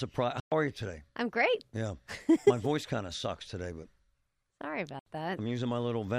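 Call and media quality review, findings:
Speech drops to sudden silence twice: 0.40–0.52 s (116 ms missing) and 4.99–5.06 s (70 ms missing). Playback resumes later in the speech rather than where it stopped, so the gap is skipped material. Probable component: wireless link to headphones. Likely Bluetooth dropout: audio packets arrived too late, were discarded, and output stayed muted until good packets resumed. Gap lengths fit a run of several consecutive lost packets.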